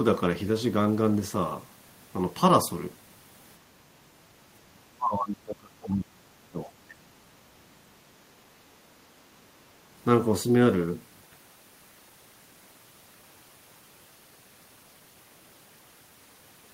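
From 4.93 to 7.02 s the speech sinks sharply, by roughly 30 dB at its deepest, for about two seconds. A shorter, shallower dip follows from 7.32 to 7.74 s, around 15 dB down. This is speech suppressed in double talk. The likely cause is an echo canceller hearing both ends at once. It cannot tell the near talker from loudspeaker echo, so it turns everything down and the speech drops away.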